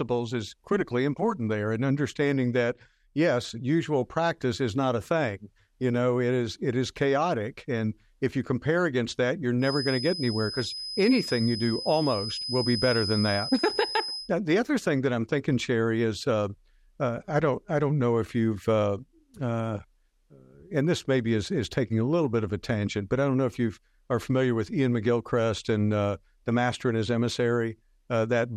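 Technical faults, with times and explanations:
9.58–14.32 s feedback whistle: a single-pitch 5 kHz tone about 10 dB below the speech, slowly swelling and fading, likely a loudspeaker-to-microphone loop held just short of runaway, appears as a flat horizontal spectrogram line.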